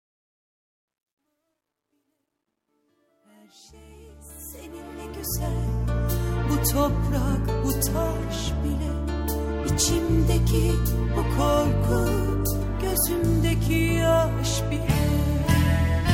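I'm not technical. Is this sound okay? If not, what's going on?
No, not quite. The opening fades in from silence and is done by about 5.96 s, but for the first 3.27 s or so the quiet part sounds gritty. That's truncation distortion on a fade: the volume control throws away fine detail, so very soft sound gets chopped into coarse steps. It sounds like a stage working with about 12 bits. Once the fade gets louder, the roughness fades away.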